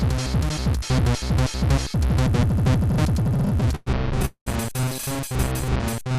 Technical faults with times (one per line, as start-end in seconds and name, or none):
3.23-4.25 repeated stalls (stutter)
4.25-4.48 call audio freeze
5.65-6.17 jitter buffer slow-down